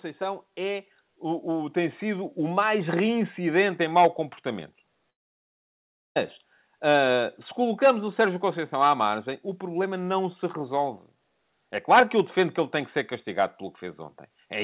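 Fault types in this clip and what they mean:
Automatic gain rising: the gain control judged the input too quiet and raised its gain step by step, so the speech and the background noise swell together rather than the speech alone getting louder. From 0.17 s to 2.88 s the level climbs by about 9 dB, settling just before "reincidente em mau comportamento". Because the noise floor lifts along with the speech, this is an automatic adjustment rather than someone moving closer to the microphone.
Long network dropout: from 5.1 s to 6.18 s, right after "reincidente em mau comportamento", about 1.06 s of audio is missing and is never recovered. The gap is filled with near-silence rather than a sustained buzz, and the speech then resumes further on with that stretch lost. The likely cause is a run of packets that never arrived. The surrounding audio, carried with nothing above 4 kHz, fits a G.711 A-law call path.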